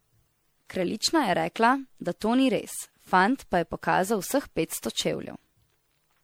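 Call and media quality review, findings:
Generation loss, present throughout the speech. Swirly, smeared texture with hollow, notched-sounding spectrum; consonant attacks blurred. Degradation heavier than a single lossy pass would produce. Likely cause: repeated MP3 decode/re-encode, consistent with around seven passes near 96 kbit/s. Each pass requantises on a shifted frame grid, so noise and spectral holes accumulate.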